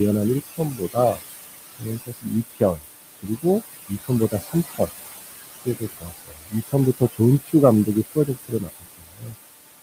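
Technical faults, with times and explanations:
Throughout: noise suppressor artifacts. The suppressor pulls down every band it judges to be steady noise by about 17 dB, frame by frame, so the room noise (about 10 dB under the speech) dips between phrases and swells under them.
0.5–1.2 s, 1.79–2.84 s, 3.88–4.9 s, 5.65–7.54 s, 7.86–9.35 s: speech cut by the noise suppressor. It mistakes quieter parts of the speech for noise and drops them by about 18 to 21 dB, swallowing brief stretches of a fraction of a second each, longest near the end.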